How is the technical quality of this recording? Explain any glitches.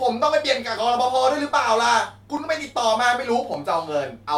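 The speech has three brief clicks. At 0.78, 2.37 and 3.54 s there is a sharp click, likely from dropped samples: under a millisecond of audio goes missing, so the waveform jumps abruptly.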